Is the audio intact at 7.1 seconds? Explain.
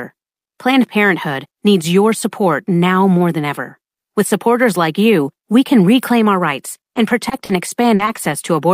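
No. From 6.93 to 8.51 s, just after "can reclaim our rights", there is repeated packet loss (robotic sound). Five short gaps, the longest 40 ms, are patched by extending the preceding audio, so the speech turns choppy, with fragments missing.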